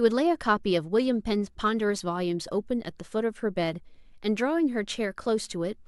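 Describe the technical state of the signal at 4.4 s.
At 4.4 s the signal is intact, with no audible fault at that moment.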